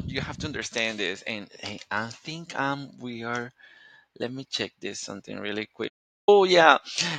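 After "check this something really", 5.88 to 6.28 s falls to silence, an audio dropout, likely from lost input; unlike a pause, room tone vanishes.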